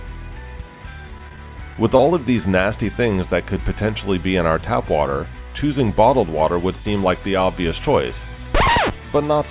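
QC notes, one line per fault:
1.18, 1.29, 1.36, 1.74 and 1.97 s: short concealed packet loss. About 10 ms of the call audio, and 20 ms at 1.97 s, arrived too late. The receiver filled each hole by extending the preceding sound, heard as brief smears or wobbles through a band that stops near 4 kHz, consistent with a G.711 call path.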